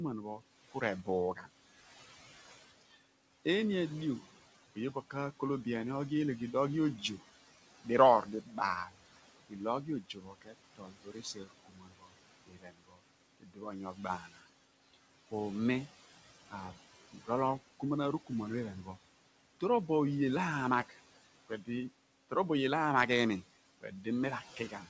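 Noise suppressor artifacts run through the whole clip. Steady room noise is pulled down by about 15 dB between phrases and rises again under the speech. On a spectrogram, the noise floor dips in the gaps and returns under the speech.

Speech cut by the noise suppressor occurs at 0.38–1.47, 4.75–5.66, 7.84–8.93, 9.49–15.32, 16.49–18.3, 20.89–21.68 and 23.81–24.87 s. Quiet sounds are mistaken for noise and drop by about 11 to 19 dB. The worst stretch, 9.49–15.32 s, loses roughly three seconds in total. Consonants and endings sound swallowed, and they show as notched waveform and missing spectrogram energy.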